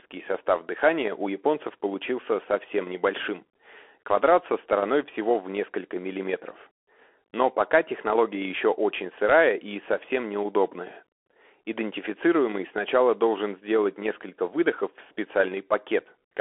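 Throughout the speech, a Bluetooth CVSD headset codec squeezes the band to roughly 300 Hz–3.4 kHz. Its one-bit delta coding, fitting a 64 kbps link, leaves granular hiss, scratchy s sounds and slope-overload distortion on loud highs, which plain telephone filtering lacks.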